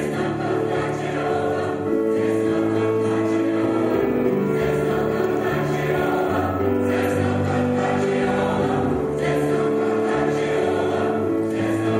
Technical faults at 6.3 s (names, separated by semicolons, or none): crude rate conversion